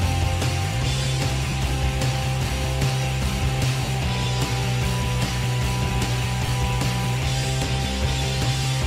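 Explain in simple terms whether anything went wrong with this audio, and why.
Three brief dropouts occurred over the Bluetooth link, a fault called lost LE Audio frames. Small packets of audio never arrived, at 1.50 to 1.53 s, 3.85 to 3.88 s, and 6.46 to 6.48 s. The first two gaps last about 30 ms and the last about 20 ms. To cover each gap, the receiver replayed the last good moment with its detail scrambled, so any tone briefly turns into a noisy smear rather than falling silent.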